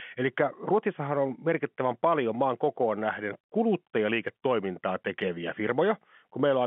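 No technical faults are audible.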